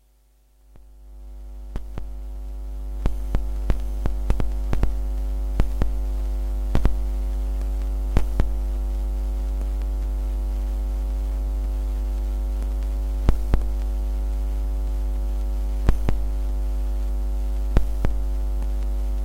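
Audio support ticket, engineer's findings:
No technical faults found anywhere in the recording of sounds. No component implicated, nothing to escalate.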